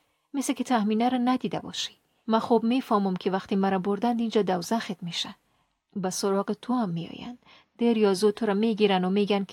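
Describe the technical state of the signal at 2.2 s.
At 2.2 s the speech signal is intact, with no technical fault present at that moment.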